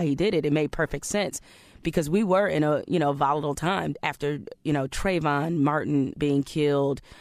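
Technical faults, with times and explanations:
Nothing technical goes wrong anywhere in this bit of speech, so there's nothing to flag.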